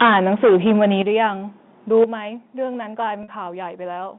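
From the very start, 0.01 to 1.23 s, the speech shows microphone overload: peaks run about 12 dB past the converter's limit and roughly a tenth of the samples are flattened, giving a harsh, crackling edge to the louder syllables. The likely cause is input gain set too high, so the waveform tops hit the converter's limit. Almost immediately, at 0.02 s, the microphone volume is stepped down by 3 dB, most likely the call software's automatic gain control reacting to the clipping. That step is too small to stop it, so a second, larger drop of 9 dB follows at 1.02 s, and voice and background fall together in one abrupt step.

A shorter overload burst comes at 1.94 to 2.04 s, only about 2 dB over but again clipping roughly a tenth of the samples, probably from a loud syllable meeting the still-high gain. At 2.04 s the level is cut once more, by 8 dB, likely the same automatic correction reacting to that peak.

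At 3.23 to 3.28 s there is packet loss with pitch repetition. About 50 ms of audio is missing, which fits five 10 ms packets. The receiver fills the gap by repeating the last pitch cycle, so the sound briefly holds on a slightly buzzy, sustained tone before normal speech resumes. The narrow telephone band of the G.711 path is audible throughout.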